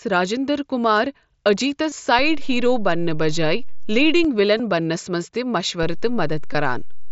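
At 1.89 to 1.92 s there's a concealed Bluetooth headset packet loss. About 22 ms went missing between headset and phone, which fits roughly three dropped frames, and the receiver papered over the gap by repeating a matching chunk of recent waveform. It comes through as a brief buzzy hold with a slight warble as the real signal picks back up. At 2.19 s a DC step kicks in: the waveform's zero line jumps and stays offset until 4.25 s, so you get a low thump at each edge while the speech carries on underneath. Another concealed packet loss lands at 4.57 to 4.60 s, again about 22 ms, just before "بننَس منٛز تہِ", with the same short buzzy patch. Right after those words, at 5.83 s, a second DC step shifts the baseline and it holds to the end of the clip, marked by one low thump. A last packet loss at 6.53 s is only about 15 ms, likely two frames, filled in with repeated waveform. Throughout, the mSBC headset codec adds its light graininess on louder sounds.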